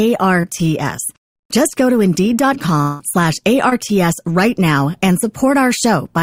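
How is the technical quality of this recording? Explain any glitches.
Three network glitches interrupt the recording: two brief ones and one longer gap.

Short concealed packet loss, at 0.41 s and again at 3.69 s: about 20 ms of audio arrived too late for the decoder each time, so the receiver extended the preceding sound to cover the gap and blended back. Each appears as a quick smear or wobble lasting a few hundredths of a second.

Long network dropout, from 2.81 to 3.01 s: the likely cause is a stall in the incoming stream, which left about 180 ms with nothing real to play. The whole gap is filled by a synthetic continuation of the last sound, a fading buzzy or hissy tail with no silence, before the audio resumes with that stretch missing.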